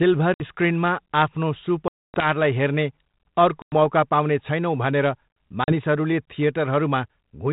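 Packet loss on an ADPCM call punches hard-edged silent holes at 0.34, 1.88, 3.62 and 5.64 s, lasting 60, 260, 100 and 40 ms. The decoder's predictor and step size drift from the sender's, so the speech returns slightly distorted before settling.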